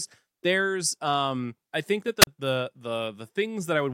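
At 2.21 s, right after "um I think that", a wireless microphone squelch dropout occurs: the FM radio link fades, hiss rises briefly, and the receiver's squelch mutes the output for about 37 ms, leaving a near-silent gap before the speech returns at 2.27 s.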